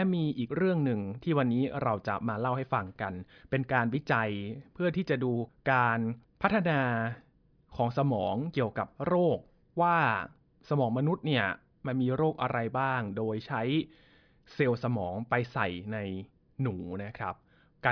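Listening closely to the speech, nothing stood out as a technical problem at any point.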